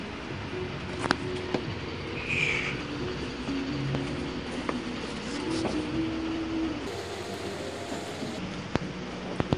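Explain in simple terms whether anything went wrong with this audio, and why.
From 6.87 to 8.39 s there is a wrong sample rate: audio seemingly recorded near 22 kHz was played at 32 kHz, so the sound runs 1.45 times too fast and about 6.5 semitones higher.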